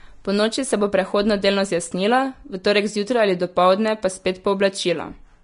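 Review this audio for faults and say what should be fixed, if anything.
The speech sounds hissy and grainy for its whole length, with roughened tone, softened consonant attacks and nothing above about 10.5 kHz. This is likely Vorbis compression at a low setting, which fits a bitrate near 36 kbps. The coarsely quantised treble turns fine detail into noise-like texture. Encoding at a higher Vorbis quality, or keeping a lossless master, would prevent it.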